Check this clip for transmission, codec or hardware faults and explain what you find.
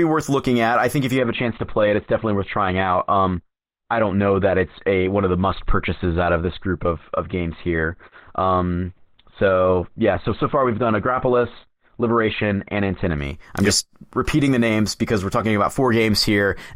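One transmission fault: an adaptive stream dropping to a lower bitrate from 1.18 s, after "I think if you", to 13.18 s, before "I'm yep just repeating". The slowed connection forced a lower-bitrate version, consistent with Opus falling from about 64 to 12 kbit/s. Treble switches abruptly to dull, with no gap. A spectrogram shows everything above 4.2 kHz cut off across that stretch.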